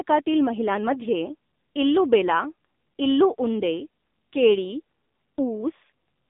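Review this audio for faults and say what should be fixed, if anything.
The speech passed through an AMR narrowband mobile codec, the AMR-NB speech coder used on 2G and 3G calls, for the whole clip. It samples at 8 kHz and rebuilds speech from a vocal-tract model excited by a few pulses per sub-frame, so the sound is confined to a 200 Hz to 3.7 kHz line band with nothing above 3.7 kHz. The heavy buzzy, synthetic coloration points to one of the low modes, around 6.7 kbps. To prevent it, record or route the audio over a wideband or full-band path rather than a narrowband mobile link.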